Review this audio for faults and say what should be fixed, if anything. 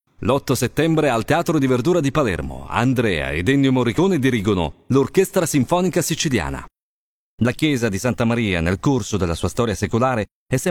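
Nothing here needs fixing; no audible faults were found anywhere in the clip.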